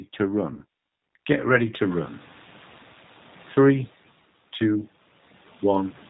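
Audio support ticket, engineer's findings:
G.729 codec, whole clip: speech band-limited with nothing above 4 kHz. Rough, slightly synthetic texture on vowels and consonants, plainly audible, consistent with 8 kbit/s G.729A. Unlike simple low-pass or low-bitrate MP3, the roughness follows pitch pulses rather than showing up as smearing or swirling highs.

VoIP packet loss concealed by the speech codec, 0.54–0.62 s: about 40 ms of audio replaced by stretched sound that fades, consistent with two lost 20 ms packets. Decoder extrapolates last pitch and filter while lowering gain. The sound stays weak briefly after packets resume. A plain dropout would be silent with a hard edge. This one has no gap, only a decaying fill.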